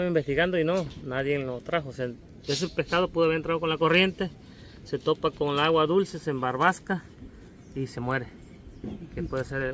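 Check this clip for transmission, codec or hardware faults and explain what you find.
No transmission, codec or hardware faults found here.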